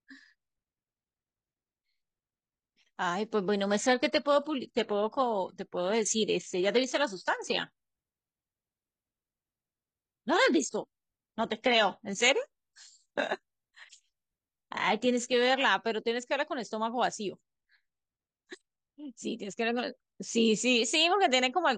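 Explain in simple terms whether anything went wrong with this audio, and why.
From 3.65 to 15.65 s the speech suddenly sounds rougher, with more codec artefacts: an adaptive stream at a lower bitrate. The sound never stops, unlike a dropout.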